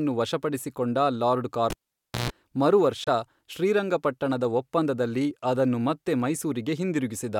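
A speech recording with two faults. At 1.70 s a live cable was pulled and plugged in: a pop, roughly 550 ms of near silence, a 137 ms burst of 60 Hz mains buzz, then another pop at 2.30 s. At 3.04 s, likely a Bluetooth dropout, the audio cuts to silence for 23 ms, about one lost frame's worth, before resuming further along as if it had played on.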